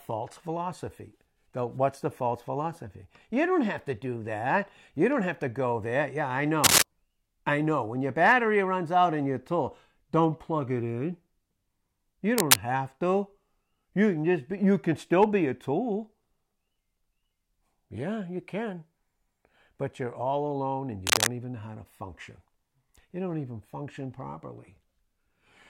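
A speech recording carries three short bursts of cable scratch noise. They fall at 6.64 to 6.82 s, at 12.38 to 12.56 s just before "have to", and at 21.06 to 21.30 s between "you're all alone and" and "even know how to". Each is a dense, ragged rustle lying on top of the speech. The first is the loudest, well above the talker. The later two are somewhat above it. A worn lead or connector being moved is the likely cause.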